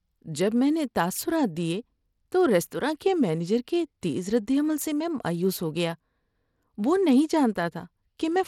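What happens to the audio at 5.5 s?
At 5.5 s, as throughout, the speech carries gritty grain and flickering treble, likely from Bluetooth SBC compression starving the top sub-bands at roughly 96 kbps, unlike a clean low-pass rolling off above 17.4 kHz.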